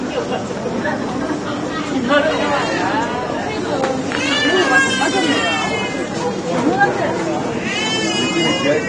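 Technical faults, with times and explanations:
Throughout, AAC compression: the sound is clearly damaged by a lossy codec, with nothing at all above 9.5 kHz, so the top end is dull and closed in. Sustained parts have a smeared, warbly, fizzy texture. The likely cause is AAC-LC at a low rate, roughly what you'd hear around 32 kbps. At that rate the encoder can't afford the top band, so it cuts it off and quantises what's left coarsely, leaving gaps and swirl in the spectrum.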